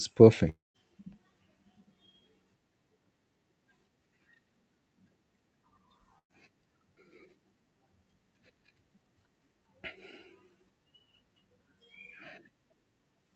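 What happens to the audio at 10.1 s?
At 10.1 s the speech comes through intact, with nothing going wrong at that moment.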